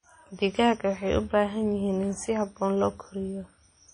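From start to end, the speech carries plainly audible WMA compression damage, likely from an early WMA encoder at a low bitrate that fits about 32 kbps. Long transform blocks smear quantisation noise around each syllable, giving a ringing, washy quality and a hiss that swells and fades with the signal. On a spectrogram, nothing appears above 10.1 kHz, and weaker components show as patchy gaps where they were zeroed, with blurred, smeared energy around onsets.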